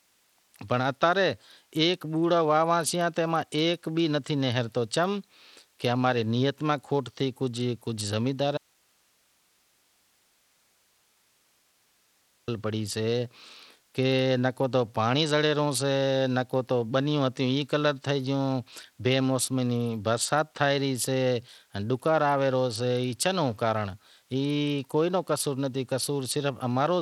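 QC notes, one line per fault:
Throughout: Bluetooth SBC compression. Gritty, thin treble that flickers, likely from a starved bit pool near 80 kbps; the spectrogram shows patchy, blinking upper sub-bands.
8.58–12.48 s: audio dropout to a faint residue. The signal cuts abruptly for 3.9 s, leaving only hiss about 40 dB down, likely a lost link; the waveform shows a flat, thin noise floor.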